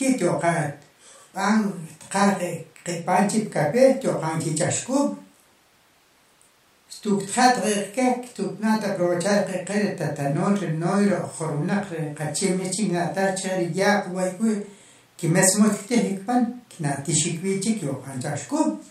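No technical faults are audible.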